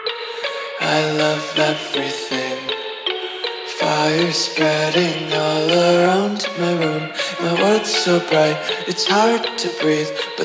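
No technical faults can be heard anywhere in the audio, and the signal holds steady throughout.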